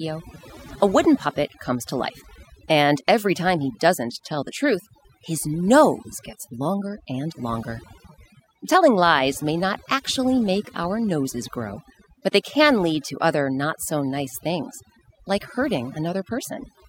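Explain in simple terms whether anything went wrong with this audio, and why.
A noise reduction tool was turned up far too high, so this clip suffers from overdone noise removal from start to finish. The tool shuts off any slice of the sound that resembles its guess at the background noise, and the softer parts of the speech get caught too. Between phrases the background drops and breaks up into twinkling, warbling specks.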